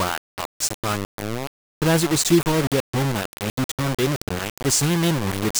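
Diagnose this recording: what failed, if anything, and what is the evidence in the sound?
Low bit depth without dither runs through the whole recording, from start to finish. The speech carries a coarse, grainy distortion that rises and falls with the voice. Quieter syllables and decays break into gritty sputter, and the softest passages collapse to silence between steps. The error sits at about the same level as the speech itself, which fits roughly 4-bit resolution with plain rounding. The likely stage is a sample-format conversion that reduced word length without dither, so the rounding error tracks the signal.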